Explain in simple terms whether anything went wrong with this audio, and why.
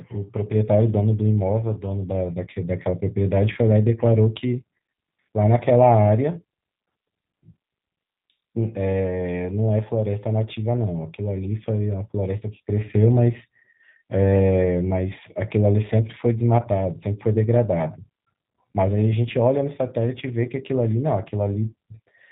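The speech carries G.729 codec damage from start to finish. This phone-style codec rebuilds the voice from a simple model instead of sending the real sound. Everything above 4 kHz is gone, so it sounds muffled. The voice also comes out slightly rough and synthetic.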